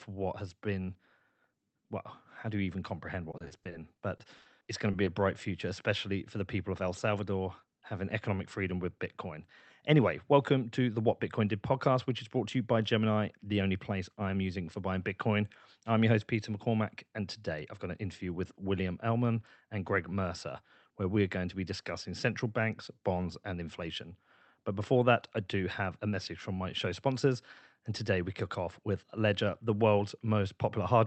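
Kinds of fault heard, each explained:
Repeated packet loss (robotic sound): Between 3.31 and 5.09 s the speech is broken by 14 short holes, none longer than 40 ms. Each is patched by extending the preceding sound, so about 18% of the stretch is concealed audio. Unlike a single dropout or a clean mute, the gaps come in quick succession, and the repeated patching gives the speech a choppy, robotic quality with small pieces missing.
Jitter buffer speed-up: From 25.41 to 25.81 s the speech runs about 8% fast (108% speed) while its pitch stays put. To drain excess buffered delay, the receiver cut out tiny pitch-period-sized pieces totalling around 40 ms. This differs from packet loss because nothing sounds missing or robotic. It also differs from a tape-style speed change because the pitch does not rise. The brief passage simply sounds hurried.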